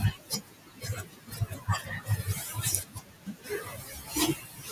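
The noise suppressor is working on the whole clip, and you can hear its artifacts: the leftover noise pumps frame by frame, sinking between the words and rising under them. From the start to 4.17 s the suppressor cuts speech it mistakes for noise, pulling parts down by as much as about 18 dB, roughly three seconds in all, so soft sounds get swallowed. The room noise steps up by about 16 dB around 2 s, where it sits about 17 dB below the speech. It happens again from 4.34 s to the end, dipping about 15 dB over a bit under half a second, and the tail goes faint.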